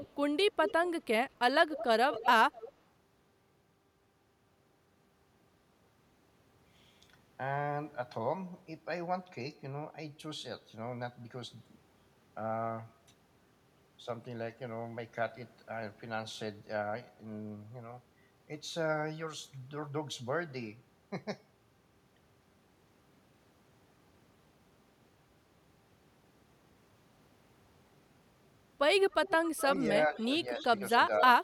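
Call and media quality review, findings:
Echo leak: delayed repeat of the far-end voice trailing speech at 0.0–0.08 s, 0.67–1.02 s, 1.76–2.71 s, 29.1–30.25 s and 30.57–31.19 s. Copy sits about 10 to 20 dB under the speech, with a lag of roughly 220 ms early and about 250 ms in the last three seconds. Likely cause: the loudspeaker end's echo canceller is letting residual mic pickup through.

Speech suppressed in double talk: talker audio ducks by up to about 5 dB, totalling around 0.3 s, between 30.08 and 30.64 s, overlapping the late echo. Likely cause: the canceller can't separate near talk from the loudspeaker echo while both sides speak, so it attenuates everything, clipping the local voice along with the residue.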